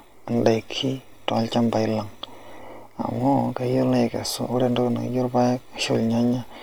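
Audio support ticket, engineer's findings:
No faults found on listening; the speech comes through with no audible dropout, distortion or timing problem to trace to any component.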